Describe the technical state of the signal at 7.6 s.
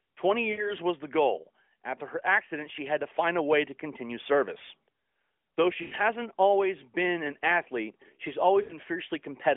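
At 7.6 s the audio is intact, with nothing beyond the narrowband mobile-codec character (a 300 to 3400 Hz telephone band at around 12.2 kbps) that runs through the clip.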